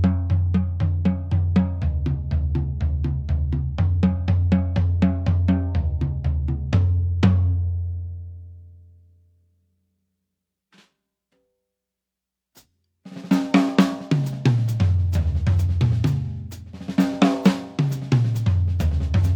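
No technical faults are audible.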